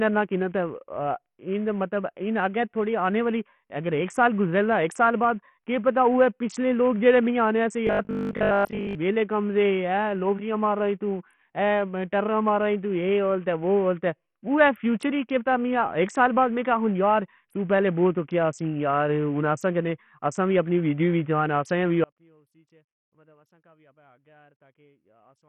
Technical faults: Bluetooth SBC compression; robotic sound from repeated short buffers; audio dropout to a faint residue

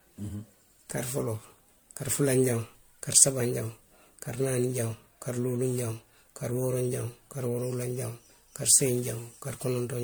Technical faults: generation loss

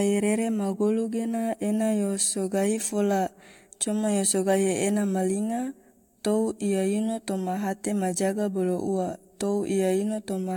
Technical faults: none

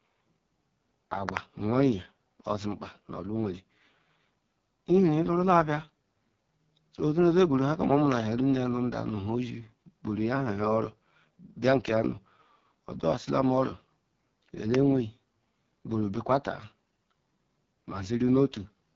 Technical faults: AMR wideband (HD Voice) codec; loud pop

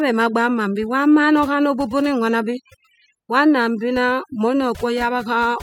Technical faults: overdone noise removal

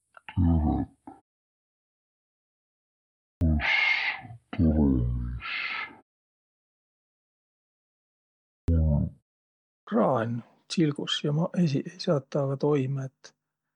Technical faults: section at the wrong speed; clipped start after a pause

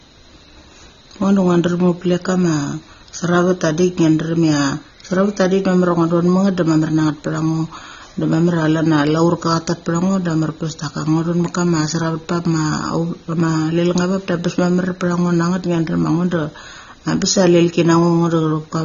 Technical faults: AAC compression

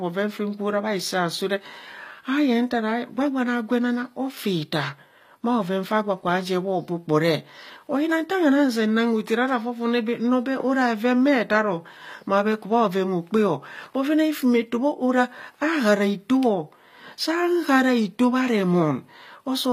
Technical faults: HE-AAC compression

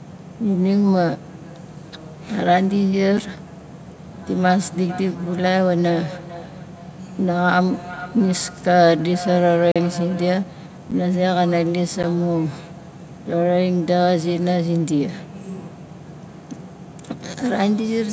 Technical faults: block of digital silence; feedback echo between two devices

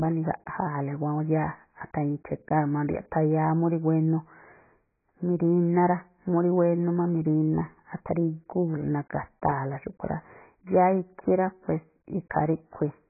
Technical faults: AAC compression

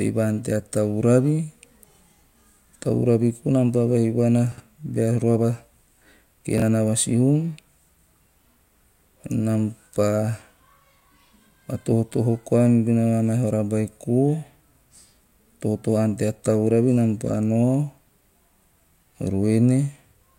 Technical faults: chunks out of order

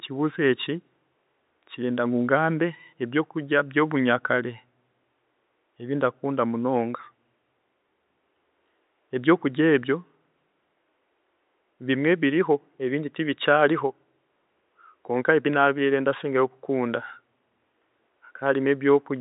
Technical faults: none

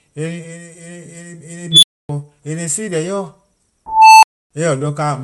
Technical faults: Bluetooth LC3 compression; unstable filter

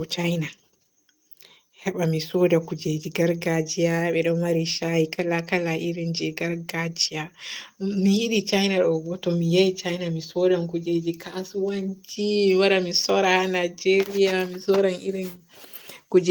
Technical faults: none

